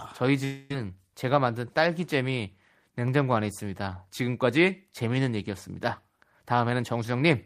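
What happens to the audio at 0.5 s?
A long network dropout, likely, stops audio arriving from 0.44 to 0.71 s, so about a quarter second of speech is lost. The receiver stretches the last sound into a fading buzz across nearly the whole gap, and speech resumes at 0.71 s without the missing part.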